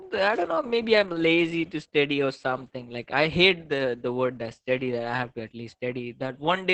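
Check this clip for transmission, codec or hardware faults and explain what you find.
One codec fault runs through the whole clip: Opus voice compression. The encoder is working in its SILK linear-prediction mode at a low rate, which fits roughly 10 kbps in 20 ms frames, with the band held to wideband, so nothing above 8 kHz survives. Spending so few bits forces a coarse excitation signal. The speech comes out heavily damaged: muffled, hoarse and slightly robotic from start to finish.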